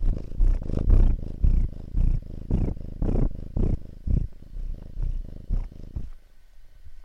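At 4.72 s, compressed frames are skipped: about four whole frames of the encoded stream never reach the output, so the sound jumps ahead by roughly a tenth of a second. The frame length of 26.1 ms points to MP3-style framing. Because adjacent frames overlap, the join is a short smeared blip, not a sharp click. On a waveform the envelope shifts abruptly; a spectrogram shows a brief vertical smudge where the texture discontinues.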